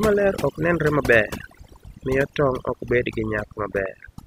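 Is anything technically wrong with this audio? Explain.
Yes. Overdone noise removal runs through the whole speech clip. The noise reduction was set too strong. It cuts individual frequency bands whenever they sit near its noise estimate. Quiet parts of the voice vanish with them. The background drops and breaks up into twinkling specks.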